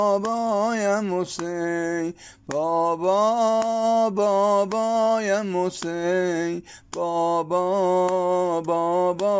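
No technical faults are audible.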